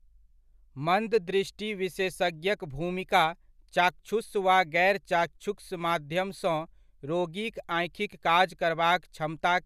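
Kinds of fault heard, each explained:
No technical fault can be heard anywhere in the speech recording. Nothing in the audio marks a point where the signal breaks, distorts or changes character.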